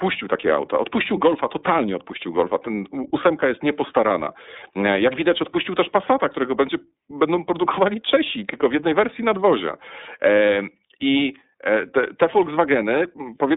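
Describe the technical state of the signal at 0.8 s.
At 0.8 s the speech carries iLBC codec damage, present across the whole clip. The codec codes each 30 ms frame's excitation on its own, so the sound is clear but plainly rough and synthetic, with a grainy texture consistent with the 13.33 kbps mode. Telephone-style band-limiting to roughly 250 Hz to 3.7 kHz leaves it thin. A spectrogram shows a hard ceiling with nothing above 3.8 kHz and little energy below 250 Hz.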